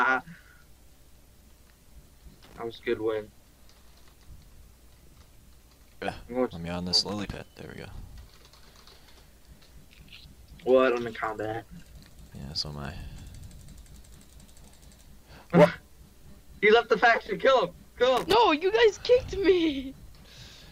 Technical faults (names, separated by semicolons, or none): loose connector crackle